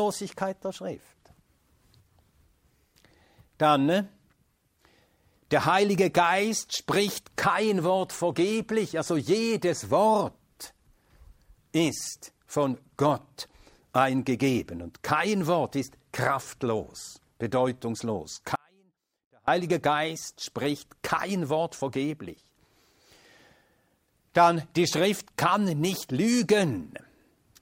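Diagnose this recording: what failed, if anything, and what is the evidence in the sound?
At 18.56 s the sound cuts off abruptly and returns at 19.48 s, leaving a gap of about 0.92 s that holds only a faint residue roughly 35 dB below the normal level. This audio dropout to a faint residue likely comes from a brief loss of signal upstream while the downstream chain stayed live.

Between 21.62 and 21.96 s there are three short ticks, each around a millisecond at most, evenly spaced. These CD scratch ticks point to disc playback: a surface blemish on each rotation corrupts more data than error correction can repair, so the player briefly mutes or interpolates.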